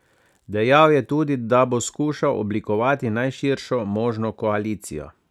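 Listening through the speech recording, nothing stood out as a technical fault at any point.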